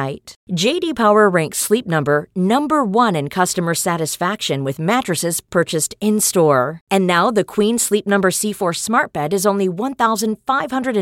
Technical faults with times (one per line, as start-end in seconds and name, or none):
none